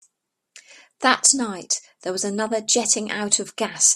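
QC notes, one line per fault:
No faults found in this speech clip. Nothing here calls for a timed entry.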